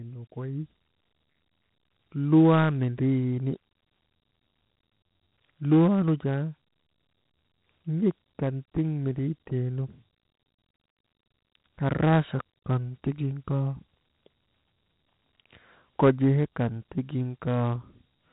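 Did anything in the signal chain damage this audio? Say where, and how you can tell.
Yes. The damage is at the codec stage and runs the whole clip. This is Dialogic VOX ADPCM. Nothing is present above about 3.9 kHz, which points to 8 kHz sampling, and the stream fits 32 kbps, that is, 4 bits per sample. The ADPCM coder sends only a coarse step-adapted difference from each predicted sample, so quantisation error rides on the speech as a plainly audible grainy roughness that rises and falls with the signal.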